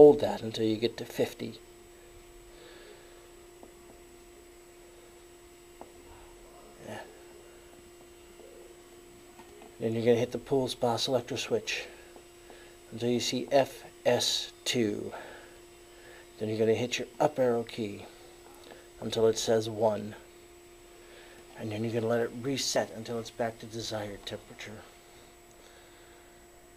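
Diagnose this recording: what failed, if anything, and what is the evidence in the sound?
At 11.0 s and 22.76 s the sound jumps forward with no gap. About 20 ms is lost at the first point and about 40 ms at the second. The likely cause is a dropped buffer (overrun) at the driver stage: the hardware overwrote samples before the program read them.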